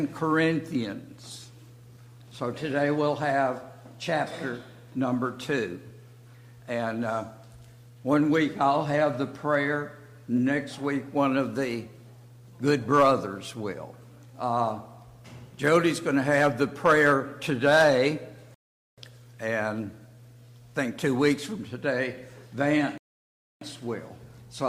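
At 18.54 s and again at 22.98 s the playback hits a rebuffering stall: the player starves for data, falls silent for 0.43 s and then 0.64 s, and resumes exactly where it stopped. The waveform shows flat gaps; the spectrogram shows blank vertical bands.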